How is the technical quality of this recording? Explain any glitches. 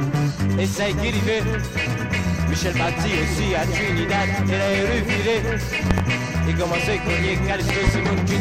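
Two glitches stand out, both loud pops. Around 5.91 to 6.02 s there's a double pop roughly 20 dB above the sound, and at 7.70 to 7.91 s another pair, roughly 15 dB up. The sound keeps going underneath. The likely cause is a voltage spike from a plug, switch, static or driver hiccup getting into the signal chain.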